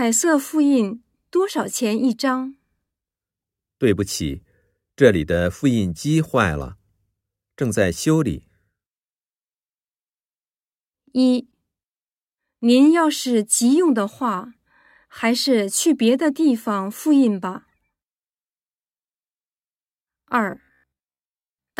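Robotic sound from repeated short buffers from 20.51 s: speech becomes a metallic 67 Hz buzz, likely a 15 ms chunk looped over skipped audio.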